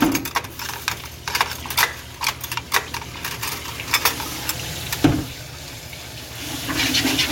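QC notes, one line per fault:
1.75 s, dropped buffer (overrun): likely the hardware overwrote samples before the program read them. The audio skips ahead a few milliseconds with no gap, heard as a jump in the sound.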